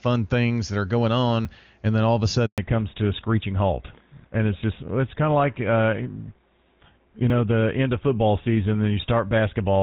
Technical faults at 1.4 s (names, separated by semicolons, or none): dropped buffer (overrun)